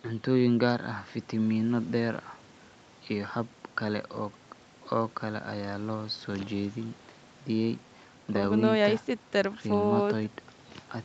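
There are no technical faults in this speech to describe in time order.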